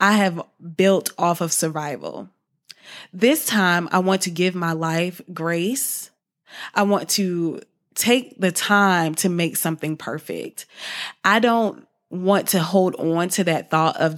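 Speech recording with no technical faults to report.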